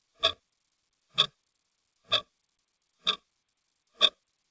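A recording of sounds carried over a call link, with the high end stopping at 8 kHz as the G.722 path at 64 kbps encodes it. The main problem is clock drift between sender and receiver: the sending device's clock runs roughly 4 percent fast, so audio arrives quicker than it is played and the jitter buffer keeps overfilling. Unlike packet loss, nothing goes silent or garbled; the fault shows as a steady pull on timing across the whole clip. The repeated timing corrections from 0.40 s to 4.32 s are the audible result: the receiver keeps trimming small pieces to catch up, for an effective playback speed of about 105 percent. Every edit pushes the same way but at uneven spacing, heard, if at all, as faint hiccups and a slightly hurried, unsteady tempo rather than the constant pitch shift of a fixed resampling error.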